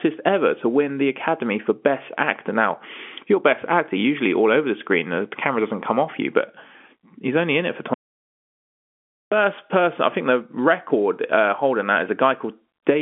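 It's a speech clip carried over a telephone line, so it's band-limited with nothing above about 3.7 kHz, and there's one real problem: an audio dropout to silence. Right after "only in it for", at 7.94 s, the signal drops to silence, with no room tone or hiss at all, until 9.32 s, where it picks up at "person I think the". That's about 1.38 s of speech simply gone, most likely because the input was briefly disconnected or muted while recording carried on.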